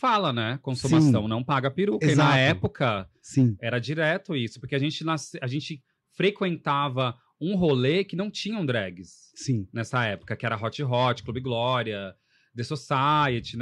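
No technical faults are audible anywhere in the speech recording.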